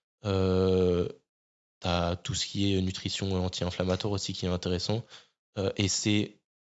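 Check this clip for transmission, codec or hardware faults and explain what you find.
No faults were found.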